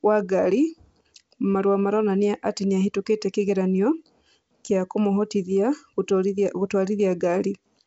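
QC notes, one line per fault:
Nothing to flag here: the speech comes through G.722 wideband telephone coding at 64 kbit/s, with the sound tailing off around 7.7 kHz as that path normally does, and no faults turn up anywhere in the clip.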